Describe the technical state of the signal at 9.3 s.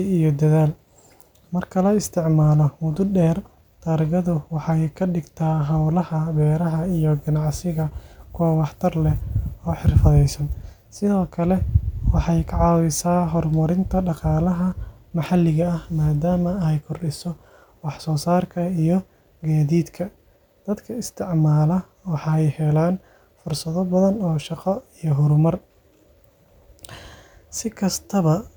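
At 9.3 s the signal is intact, with no audible technical fault at that moment.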